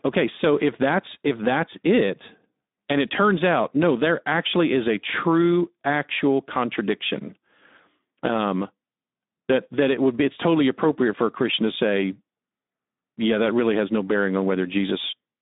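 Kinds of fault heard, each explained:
Speex codec: Throughout, the speech sounds plainly hoarse and noisy, confined to a narrow band from 200 Hz to 3.7 kHz. This CELP speech codec has too few bits to model the excitation cleanly. The damage fits a low setting around 11 kbps.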